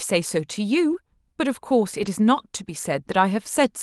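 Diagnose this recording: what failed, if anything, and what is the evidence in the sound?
The network dropped packets, and each lost packet was rebuilt from error correction: no gaps, just rougher, noisier stretches at 0.89–0.95 s and 1.97–2.07 s. That fits two and then three lost packets, with the Opus decoder playing the low-bitrate backup copies carried in the next packets.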